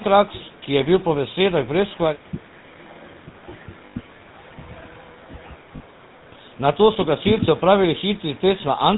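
From start to finish the speech carries the buzzy, gravelly roughness of the GSM full-rate codec, which fits its 13 kbps mode. Pulse-driven vocal-tract modelling sparsely rebuilds the excitation, and nothing survives above 4 kHz. The grainy buzz sets it apart from the smeared, watery sound of transform codecs.

From 3.86 to 3.97 s, and again at 5.76 to 5.80 s, lost GSM frames are heard. The decoder repeats the last good frame's settings, so the sound is held as a brief metallic ring, not a silent gap or a click. The first loss points to about five frames; the second, to about two.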